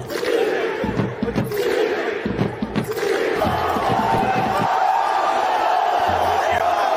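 Corrupt frame decoded at 6.58–6.62 s: one compressed frame with flipped bits was played anyway, putting energy at the wrong frequencies as a brief chirp, squeak, blip or burst of noise peaking around -10 dBFS.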